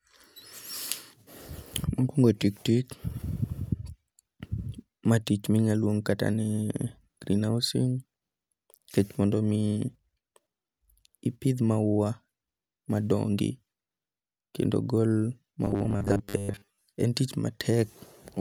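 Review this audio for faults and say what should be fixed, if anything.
From 15.65 to 16.84 s the speech becomes robotic sound from repeated short buffers. A rigid, metallic buzz at 100 Hz runs through it, and most of that stretch is repeated audio. The likely cause is late-arriving audio, so a chunk of about 10 ms is replayed while new audio is skipped. Prevent it with a larger jitter buffer and higher priority for the audio thread.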